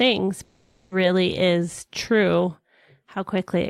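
A long network dropout runs from 0.43 to 0.94 s. The last sound is stretched into a fading buzz or hiss for about 0.48 s, with no silent stretch, and the speech resumes at "is true". The likely cause is that no audio arrived, so that portion was lost.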